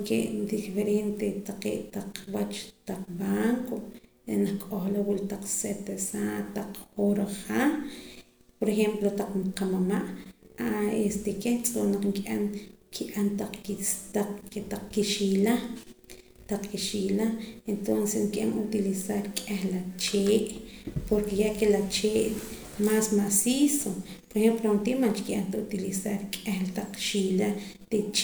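No technical faults are audible.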